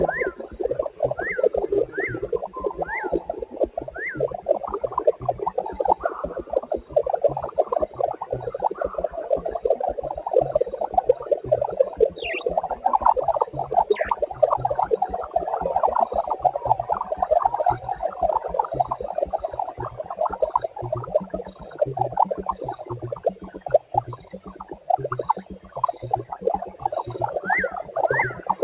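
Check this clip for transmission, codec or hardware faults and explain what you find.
One fault runs through the whole clip: a noise suppressor applied to music or sounds, audible over the band-limited call path, which has nothing above 4 kHz and fits G.711 A-law at 64 kbps.

Throughout, a speech-tuned suppressor treats sustained tones and tails as noise and ducks them by around 5 dB. The sound pumps and thins, and the waveform shows held envelopes sagging after each attack.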